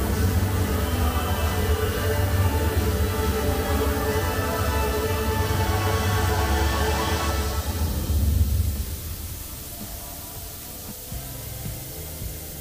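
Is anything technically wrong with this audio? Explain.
No, there is nothing technically wrong with this audio. No fault turns up anywhere in the clip.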